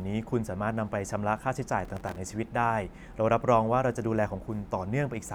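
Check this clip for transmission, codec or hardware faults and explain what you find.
There's one fault: processor overload crackle from 1.85 to 2.18 s. The processor kept missing deadlines on tiny buffers, around a millisecond and a half each, about twenty across that stretch, replaying stale audio each time. You hear a gritty tearing crackle over the speech that stops once the load eases.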